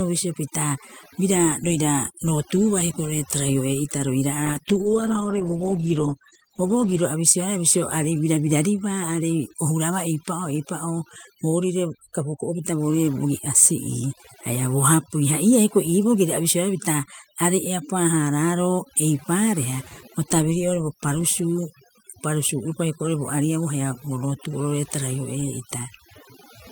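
Overdone noise removal runs through the entire recording. The noise reduction was set so aggressively that individual frequency bands sitting near the estimated noise level are pulled down hard or switched off entirely. The quieter parts of the speech are removed with them. The background falls to near silence, broken by twinkling specks where isolated bands flicker on and off. The voice has its low-level detail stripped out.

From 4.46 s to 7.09 s there is a call bitrate drop. The call's bandwidth estimate fell, and the encoder was pushed from 40 kbps down to 13 kbps, staying at that floor for about 2.6 s. At that rate Opus codes the signal much more coarsely and trims the upper frequencies. For that stretch the speech turns rough and muffled, until the bitrate climbs back.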